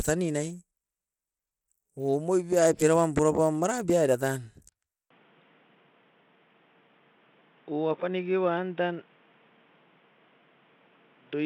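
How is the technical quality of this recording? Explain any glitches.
The technical quality is fair at best. Two faults stand out: codec grit across the whole clip, and a sharp drop in bandwidth halfway through.

From start to finish the speech carries plainly audible coding damage. It is most likely Bluetooth SBC compression. SBC splits the sound into a few wide sub-bands and hands out bits with no model of hearing. The damage is heavy enough to fit a bitrate around 96 kbps. Coarse quantisation leaves a gritty texture with some aliasing on the speech. Nothing is left above 19.2 kHz.

At 5.10 s the input switches to a poorer device, and the sound stays that way to the end. The system has likely moved to another microphone or a headset's call profile. That device passes a much narrower band, with nothing above 3.8 kHz. The speech turns dull and boxy at once. There is no gap at the switch, and the level stays about the same. 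A faint new noise floor appears, well below the speech.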